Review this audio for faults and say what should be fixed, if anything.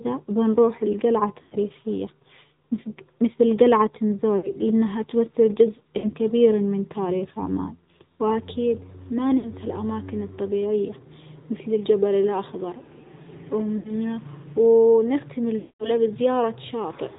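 The whole clip carries the AMR narrowband mobile codec sound. Nothing above 4 kHz survives, so the speech is boxy and phone-like. The damage is plainly audible: a buzzy, synthetic edge where the vocal-tract model and its sparse pulse excitation can't quite rebuild the voice. That fits one of the middle AMR-NB modes, around 10.2 kbps, so this looks like a recording pulled off a mobile call path, not the original source.

There are also six dropouts from lost AMR speech frames. They fall at 1.42–1.57 s (right after "بنروح لجلعة"), 4.38–4.54 s (after "مثج مثل جلعة", before "لأنها تمثل جزء كبير"), 5.98–6.11 s, 9.38–9.50 s (after "تاريخ عمان وأكيد ما"), 13.78–13.93 s, and a longer one at 15.60–15.91 s. In each, the decoder covers the gap by repeating its last good pitch and vocal-tract settings at falling gain. The shorter ones come out as a brief smeared warble. The last one stretches the sound and fades it toward silence, and the speech comes back rough for a moment.

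To fix both, get a copy from before the mobile leg or record locally at full bandwidth, since the codec coloring and the radio frame losses both happen in the call path and can't really be repaired afterwards.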